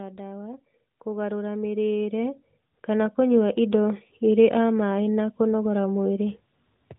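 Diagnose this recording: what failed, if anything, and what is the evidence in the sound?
Automatic gain rising in call processing: from 0.88 to 3.96 s, speech and background swell together by about 13 dB. A talker moving closer would lift only the voice.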